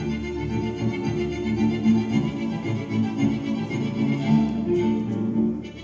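No technical faults are audible anywhere in this clip.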